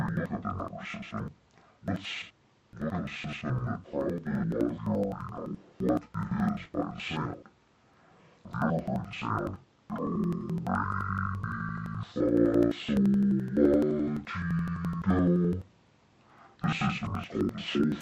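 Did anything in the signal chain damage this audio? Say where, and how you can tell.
Yes: interleaved audio read as planar, at the buffer stage. Throughout, the sound is an octave low, doubled and choppy at about 11.7 Hz, which fits 4096-sample blocks, yet the overall pace stays correct, unlike a sample-rate mismatch.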